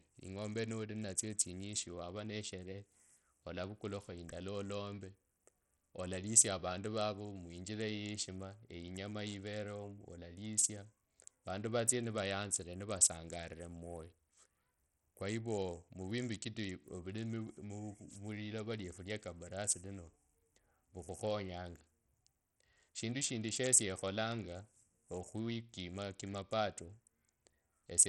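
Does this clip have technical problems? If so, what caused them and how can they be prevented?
Yes. The speech sounds gritty throughout, its treble flickers, and nothing is present above 17.1 kHz. The likely cause is heavy Bluetooth SBC compression, which fits a bitrate near 64 kbps. Record over a wired link or a higher-bitrate codec.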